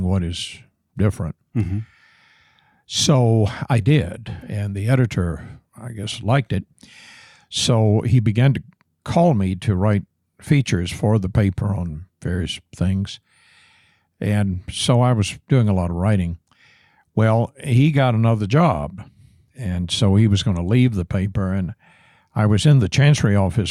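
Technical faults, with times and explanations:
No technical faults detected.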